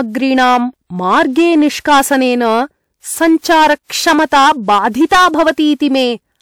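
The whole speech clip has hard clipping, driven about 13 dB past what some stage could pass, so around 7 percent of samples get flattened, adding fuzzy crackle on louder sounds. At 4.26 to 4.32 s there's pre-echo: a transform codec smeared its noise across the block, putting a 57 ms hiss ahead of an attack and softening it.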